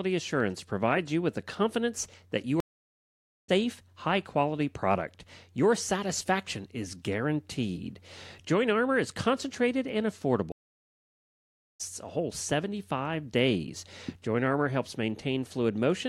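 Two stream reconnects interrupt this speech. At 2.60 s, after "the confidence that you", the audio drops to silence for 880 ms while the player loses and re-establishes its connection, then resumes at "high quality product" roughly a second further along, so that stretch of speech is skipped. At 10.52 s, after "is concentrated and", a 1.28 s silence follows, and playback rejoins at "a whole", again about a second later, with a fresh decoder restarting mid-stream.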